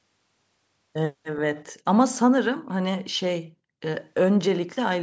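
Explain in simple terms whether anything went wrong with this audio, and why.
Between 1.55 and 1.7 seconds there is a brief, faint ghost of the speech: a quiet, delayed copy arriving about 0.41 seconds after the original, like a weak repeat in the background. This is an echo leak. It was likely caused by one side of the call playing the audio through a loudspeaker, with its microphone catching that sound and its echo canceller failing to remove all of it, so a short scrap was sent back down the line.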